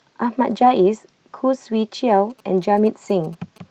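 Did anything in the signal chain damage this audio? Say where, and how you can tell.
Yes. Network and codec stage: a lost packet rebuilt from error correction at 0.61–0.71 s. The spectrogram shows a rougher, noisier patch there with no gap, which fits about three lost packets replaced by low-bitrate copies.

Analogue wiring: GSM signalling bursts from 2.3 s to the end, a galloping ticking buzz at 217 Hz, roughly 30 dB down. They appear as clustered vertical stripes with harmonic lines where the circuit rectifies a nearby phone's radio.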